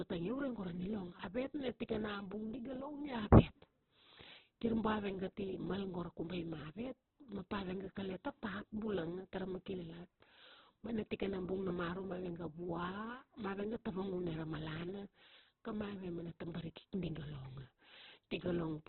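Throughout the speech the sound is grainy and rough, with a gritty texture on every syllable and nothing audible above about 4.2 kHz, so it comes across narrowband and dull. This is likely Opus compression working at a very low bitrate, which fits roughly 8 kbps. In its CELT music mode the encoder keeps each band's energy but fills bands with folded or noisy content, turning clean tones coarse, and narrows the bandwidth.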